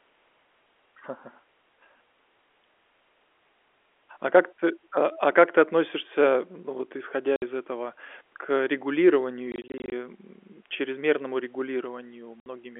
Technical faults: packet loss filled with silence

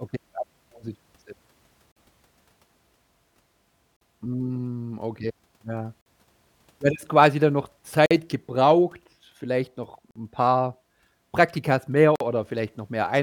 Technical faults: gap between chunks

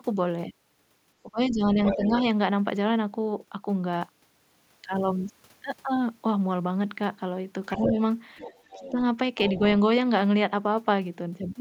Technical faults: speech suppressed in double talk; other side's voice leaking through

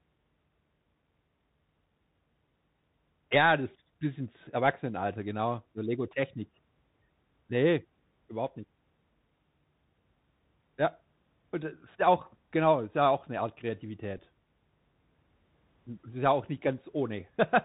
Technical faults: Bluetooth CVSD headset codec; Bluetooth headset packet repeated

